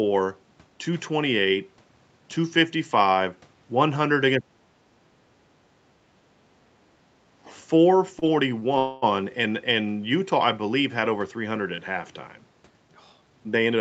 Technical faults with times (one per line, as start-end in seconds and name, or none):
4.38-5.33 speech suppressed in double talk
6.00-7.10 speech suppressed in double talk
7.44-7.58 other side's voice leaking through
8.19-8.24 short stall from a late packet
8.60-8.64 short stall from a late packet
8.78-9.04 call audio freeze
13.21-13.76 jitter buffer speed-up